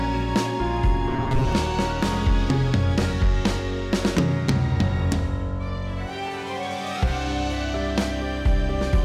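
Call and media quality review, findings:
Robotic sound from repeated short buffers, 1.11 to 1.53 s: rigid metallic buzz at 133 Hz. Likely a starved playout buffer looping segments of about 7.5 ms, with around 40% of the span repeated and real audio skipped.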